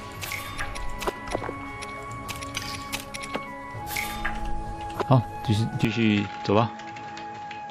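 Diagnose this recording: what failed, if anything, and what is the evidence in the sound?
The capture driver likely switched the input to a poorer device at 5.85 s. From there to the end nothing above 7.6 kHz remains, so the sound dulls, drops a few dB and gains a faint new noise floor, with no gap at the switch.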